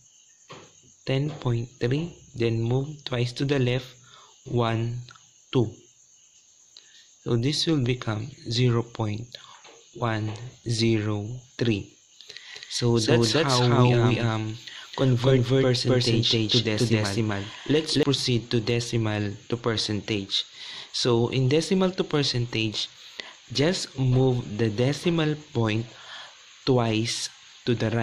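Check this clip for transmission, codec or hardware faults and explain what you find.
One fault is present, a doubled audio track from 12.55 to 18.03 s: likely a second, slower capture path mixed in, adding an equally loud copy roughly 300 ms late, starting and stopping abruptly.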